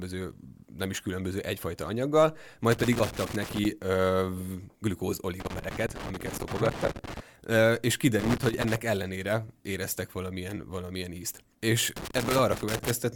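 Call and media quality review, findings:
Loose connector crackle, speech path: worn or dirty contact intermittently breaking, chopping signal. Irregular scratchy bursts 2.72–3.65 s after "is különböző egyfajta anyaggal", 5.4–7.2 s, 8.19–8.76 s before "ellenére éreztek valamilyen valamilyen", 11.96–12.91 s.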